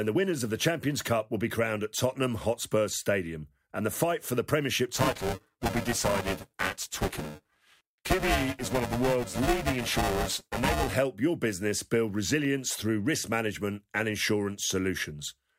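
From 4.94 to 10.94 s the speech picks up buffer tearing, a robotic buzz at 375 Hz, which fits a 128-sample buffer. Writer and reader have slipped, so roughly 40 percent of each buffer replays audio about 7 ms stale, butted on with hard joins.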